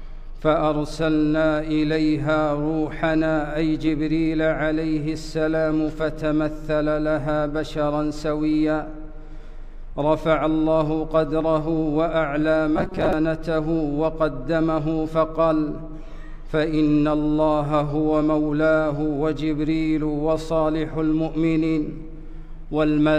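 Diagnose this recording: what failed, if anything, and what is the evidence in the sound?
Robotic sound from repeated short buffers, 12.77 to 13.13 s: the sound turns into a rigid, metallic buzz at 188 Hz. This is likely a driver or buffer underrun that loops segments of about 5.3 ms in place of missing audio, so roughly half the passage is repetition.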